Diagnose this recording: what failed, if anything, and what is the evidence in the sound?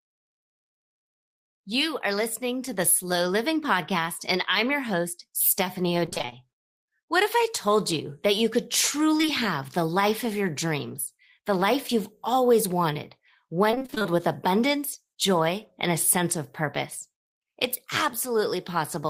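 The network path failed with repeated packet loss (robotic sound) in two stretches: 6.05 to 6.34 s, and 13.71 to 14.06 s, between "life you've always wanted" and "with abundance joy and". Packets kept arriving too late or not at all. The receiver patched each hole, the longest about 24 ms, by extending the previous sound. Roughly half of each stretch is synthetic, so the speech turns choppy, with fragments missing.

Short concealed packet loss appears as two back-to-back events at 9.18 to 9.21 s and 9.21 to 9.25 s, between "you that you could" and "have the life of". This is also a network fault. About 20 ms of audio went missing in each event, and the decoder bridged the hole by continuing the preceding pitch or noise before blending back into the real signal. The result is a brief smear or wobble at that join.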